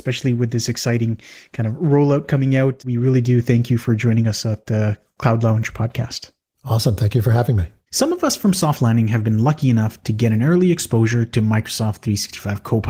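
No technical faults can be heard in this speech; it carries the character of Opus voice coding at 20 kbps in hybrid mode with the full band retained, and the coding leaves only a light mark on the sound.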